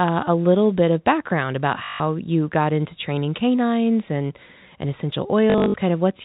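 At 1.84 s the speech catches on packet loss with the last packet repeated. For 160 ms the receiver replays one chunk of audio until new data arrives. The run buzzes at about 50 Hz, which fits 20 ms packets. It sounds like a brief robotic stutter. From 5.5 to 5.74 s it returns, scattered this time. The gaps total 160 ms, and the longest run is 60 ms, so the stutter comes in broken bursts. The band stays telephone-narrow throughout.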